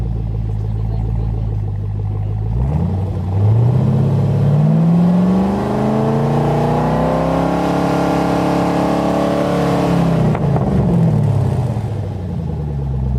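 No technical faults can be heard anywhere here.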